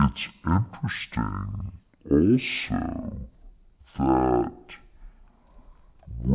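From start to end, the speech plays at half speed and a full octave low, the signature of a wrong sample rate. It fits 16 kHz samples being read out at 8 kHz with no conversion. Unlike a pitch shift or time stretch, tempo and pitch drop together by exactly the same ratio.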